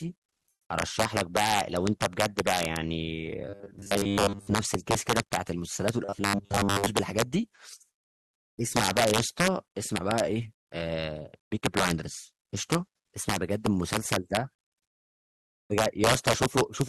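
Throughout the speech, gain pushes peaks about 7 dB past the integer limit, so they wrap to the opposite sign instead of limiting. This integer overflow affects well under 1% of samples but produces violent cracks on loud syllables.

From 3.49 to 4.54 s and again from 6.05 to 6.90 s, the audio likely arrives too seldom, and most of it is replaced by repeats of a 10 ms buffer. These repeated short buffers impose a rigid 100 Hz buzz, giving a robotic, metallic sound.

From 7.93 to 8.53 s, discontinuous transmission, likely Opus DTX, stops sending audio. The receiver fills those 600 ms with comfort noise in place of the background, so the real background gives way to steady, featureless noise about 30 dB quieter.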